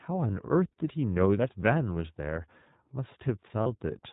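The whole speech clip has passed through the iLBC codec, a narrowband VoIP coder whose framing fits its 15.2 kbps, 20 ms mode. Everything above 4 kHz is gone, and plainly audible coding damage leaves the voice clear but rough and faintly synthetic.

At 1.94 to 1.96 s, and again at 3.62 to 3.67 s, lost iLBC frames, 20 ms and then 40 ms of packets, were concealed by repeating the last pitch cycle with noise. Each gap becomes a brief, slightly buzzy held vowel before the voice snaps straight back.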